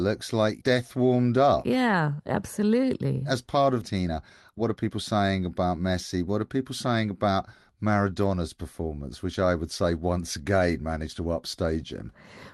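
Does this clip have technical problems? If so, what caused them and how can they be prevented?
Yes. A skip ahead at 3.81 to 3.83 s drops about one and a half seconds of speech. Playback jumps forward with no gap filled. Later packets were already waiting, so the receiver joined both sides directly. Prevent it with a deeper jitter buffer and less network loss.

A jitter buffer speed-up follows from 3.95 to 5.15 s. Speech runs at 113% with unchanged pitch and sounds hurried. Short pitch-period pieces, about 150 ms in total, were cut to shrink an overfull buffer. Prevent it by smoothing packet delivery so delayed packets don't arrive in bursts.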